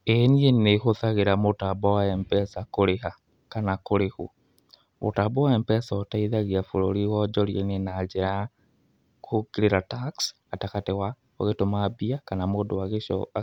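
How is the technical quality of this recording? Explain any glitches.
The signal stays steady and intact throughout, with no technical glitches to report.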